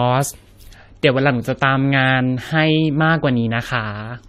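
From start to end, the speech carries generation loss. It sounds swirly and hollow, with a watery smear over the voice. Consonant attacks blur rather than snap. Nothing is present above 15.7 kHz. The likely cause is repeated lossy coding, with the audio decoded and re-encoded around seven times, which fits AAC-LC at 64 kbit/s. Each pass quantised on a shifted frame grid, so the noise piled up beyond what one encode would leave.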